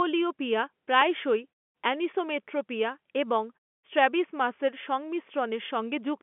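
At 1.01 s a single sharp snap, only a few milliseconds long, lands on top of the narrow telephone-band speech without interrupting it. This is an electrical switching spike, likely a brief arc from a nearby switch or motor picked up by the audio line.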